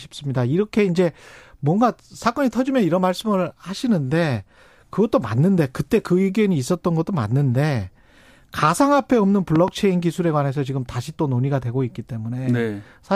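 At 9.56 s a loud pop breaks into the speech. Two sharp pulses arrive within about 0.15 s, ending by 9.70 s. They stand roughly 10 dB above the voice, which continues underneath. A voltage spike, likely from a plug, switch or static discharge, caused it.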